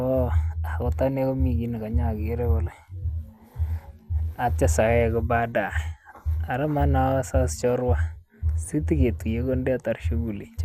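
MP2 compression runs throughout the speech, with the top end missing above about 15.9 kHz. The dull, gurgling graininess likely comes from Layer II coding, which fits a rate near 80 kbps: too few bits, so upper sub-bands switch off and the remaining bands are coarsely quantised.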